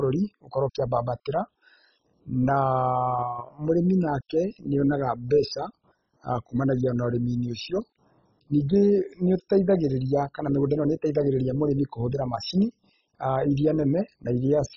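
Throughout the speech, the audio was most likely squeezed through MP2 compression at a very low rate, which fits a 16 kbps encode, so upper sub-bands were starved of bits. Nothing survives above about 7.3 kHz, leaving it dull, with heavy gurgling, granular distortion.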